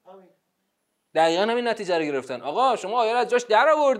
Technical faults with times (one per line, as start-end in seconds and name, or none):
none